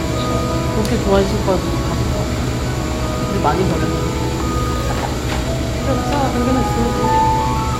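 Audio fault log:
0.85–7.73 s, clock drift buffer slips: a click lands roughly every 0.77 s, about ten in total. Likely two devices on separate clocks disagreeing by around 200 ppm, so the buffer creeps until a handful of samples is dropped or repeated, snapping the waveform.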